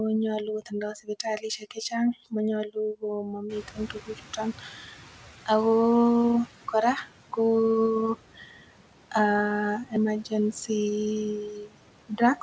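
From 3.49 s the noise suppressor is catching up. A sudden noise rise passes with less reduction at first, then sinks by about 9 dB by 6.48 s.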